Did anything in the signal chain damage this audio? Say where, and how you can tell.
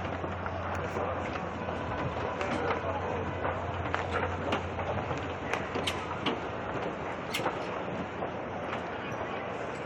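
No, nothing in this recording of sounds points to damage at any stage of the signal chain, and the signal stays continuous and intact throughout.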